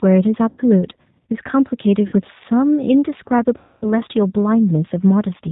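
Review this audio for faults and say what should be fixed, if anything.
Throughout, the speech sounds slightly rough and synthetic, with a plainly audible coded quality and nothing above 4 kHz. This is the G.729 codec, which fits an 8 kbit/s stream. It rebuilds each short frame from a vocal tract filter, a pitch predictor and a handful of pulses, so fine detail and upper bandwidth are discarded. A wider-band, higher-bitrate codec such as G.722 or Opus would prevent it.

At 0.49 to 0.61 s, 2.07 to 2.15 s and 3.58 to 3.87 s, the speech smears into a stretched sound that fades and stays weak briefly afterwards. The last gap is by far the longest. This is VoIP packet loss concealed by the speech codec. About 90, 60 and 240 ms of audio went missing, and the decoder stretched its last pitch and filter with shrinking gain. Because it predicts forward from those frames, it took a moment to recover once data returned. 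A steadier network path, an adequate jitter buffer and forward error correction would prevent it.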